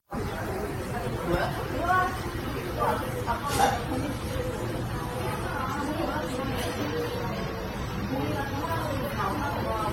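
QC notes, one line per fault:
Throughout, generation loss: swirly, hollow, smeared sound with blurred attacks and nothing above 16.6 kHz, likely from about seven repeated AAC-LC encodes near 64 kbit/s.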